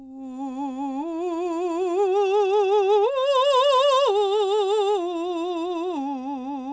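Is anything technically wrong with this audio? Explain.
No, nothing here is technically wrong: this music has come through a call connection, and the way everything above 8 kHz is missing points to a wideband call codec like G.722, which is just how that path normally sounds.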